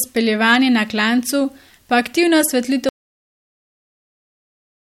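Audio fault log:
2.89 s to the end: audio dropout to silence. Right after "na klancu pa aktivna" the speech cuts off mid-flow into dead silence with no room tone at all, and it never comes back, likely because the input was lost and the recorder kept writing silence.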